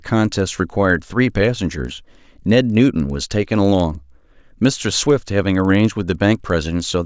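Throughout this speech clip a faint regular ticking rides on the signal, recurring every 50 ms for a 20 Hz rattle that is present only while there is sound. This is a resampler restarted on every block during the 44.1 kHz to 16 kHz conversion. Each block edge lacked its true neighbouring samples.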